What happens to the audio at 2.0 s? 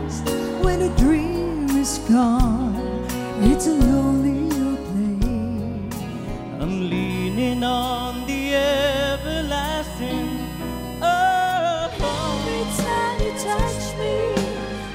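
Nothing goes wrong at 2.0 s; the audio plays through that moment intact, with no dropout, click or distortion.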